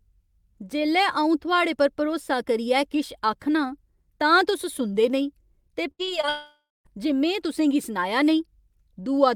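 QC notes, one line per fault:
5.91 to 6.01 s, burst of packet loss: about 80 ms of speech is missing in one run. The receiver spans the hole by extending the last stretch of audio and lowering its level as the gap goes on, so what is heard is a brief held buzz or fading hiss in place of the real sound. Speech resumes just after 6.0 s, with the audio that belonged to that interval gone rather than delayed.
6.05 to 6.09 s and 6.21 to 6.25 s, short concealed packet loss: two holes of about 20 ms each, following closely on the burst before them. Each is patched by continuing the preceding sound, pitched if it was voiced and as shaped noise if not, then cross-faded back into the arriving audio. The result is a quick smear or wobble at each point, and any short consonant falling inside one of them can drop out.
6.29 to 6.87 s, long network dropout: roughly 0.56 s of speech never plays. The last sound before the gap is stretched into a buzz or hiss that decays over several tenths of a second, leaving about 0.22 s of near-silence before speech returns at 6.87 s, further along, with the missing portion skipped. 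The length and the run of losses just before it point to a stall in delivery, likely a network outage, rather than a fault in the decoder.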